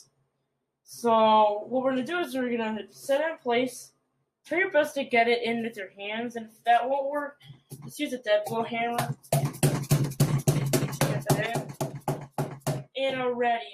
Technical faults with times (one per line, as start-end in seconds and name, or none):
11.46-13.74 one channel drops out